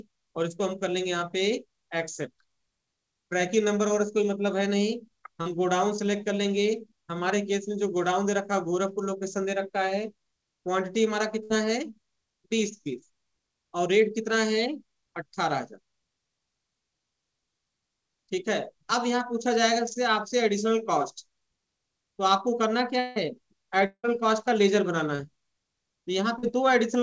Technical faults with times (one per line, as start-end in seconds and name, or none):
5.42-5.47 short concealed packet loss
11.43-11.52 burst of packet loss
23.00-23.18 long network dropout
23.86-24.05 long network dropout
25.15-25.21 short concealed packet loss
26.39-26.45 short concealed packet loss